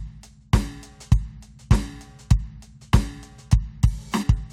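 Damaged data in a compressed stream strikes this music clip at 4.22 to 4.24 s, near its end, as a brief fault lasting about 22 ms. Bytes in the encoded file at that point were corrupted or lost, so the decoder misread or refused those frames. It then lost its place in the stream and had to hunt for the next valid frame header before normal playback could resume.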